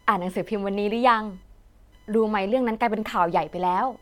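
A faint buzzing, chirping texture runs under the speech from start to finish, its pulses repeating at around a kilohertz and sitting roughly 40 dB below the voice. This is computer activity noise: as the processor, graphics card or mouse change their load, the current they draw shifts the ground that the audio circuit shares with them, and that wobble lands in the recording. It follows the machine's activity, not anything in the speech.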